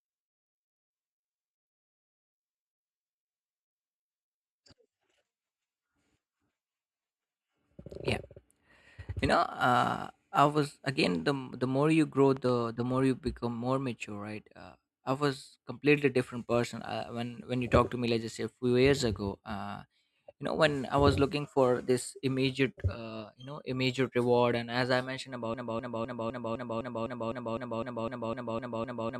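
At 12.37 s there's a loud pop, really a quick pair of them running to about 12.51 s, sitting on top of the speech while it keeps going underneath. They punch a little above the level of the talking. That double crack is the kind of thing you get when a plug, switch, bit of static or driver hiccup likely shoves a sudden voltage step into the line, and the downstream circuitry rounds it off into a thump.

Then from 25.54 s right through to the end you get a broken-record loop. A fragment of about 254 ms plays back to back, identical each time, fourteen times over, so it sounds like a stuck stutter rather than anything spoken. What's likely happened is the player, encoder or stream stalled and just kept re-sending the last chunk it had buffered, and whatever audio belonged in those final seconds never made it out.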